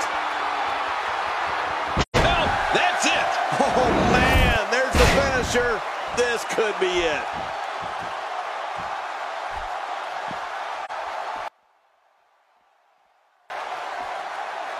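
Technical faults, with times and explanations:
2.01–2.17 s and 10.85–10.90 s, AAC frame loss with muting. The sound fades to silence for 128 ms, then for 43 ms, and returns. That fits three lost frames, then one. The decoder zeroes each missing frame, and overlapping windows soften the edges.
11.48–13.5 s, one channel inverted. The sound drops by about 32 dB to a faint residue. This is likely one stereo channel with reversed polarity. When both channels are summed to mono, their shared content cancels and only their small difference remains.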